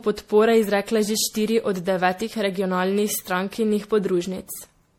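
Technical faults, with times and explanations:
Throughout, generation loss: the speech has a swirly, hollow quality, with smeared consonant attacks and a watery texture that goes beyond what a single lossy pass would produce. This is likely the result of repeated MP3 decoding and re-encoding, around five times, at settings that fit 64 kbit/s. Each pass quantises on a shifted frame grid, so noise and spectral gaps accumulate. Content is absent above 18.6 kHz.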